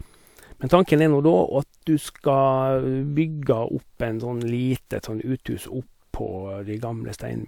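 No audible technical faults occur in this recording.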